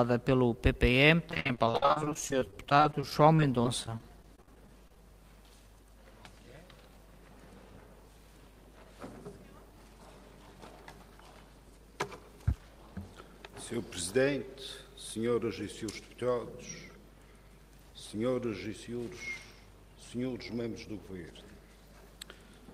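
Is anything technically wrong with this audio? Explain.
Yes, two separate network-playback faults are audible.

From 1.29 to 4.97 s there is repeated packet loss, producing the robotic sound. Dozens of short holes appear in quick succession, the longest about 55 ms. Each is patched by stretching out the last bit of sound, so about 19% of this stretch is concealment. The audio turns choppy and robotic, with fragments missing. Unlike a single dropout, the holes keep recurring, giving a sustained mechanical texture rather than one isolated glitch.

From 11.64 to 13.01 s a jitter buffer speed-up occurs. Too much audio had piled up in the receive buffer, so the player trimmed tiny pitch-period-sized slices many times over, removing around 70 ms in total. The sound runs about 6% fast and feels hurried. What separates it from a sample-rate or resampling error is that the pitch stays the same; only the timing compresses.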